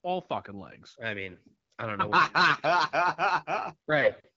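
No technical fault can be heard anywhere in the speech. The sound fits an AMR wideband (HD Voice) codec at 12.65 kbit/s, with only light coding colour and nothing above about 7.6 kHz.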